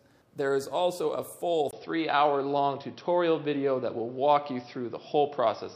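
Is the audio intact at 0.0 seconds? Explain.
Yes, the audio is intact at 0.0 seconds, with no fault to be heard at that point.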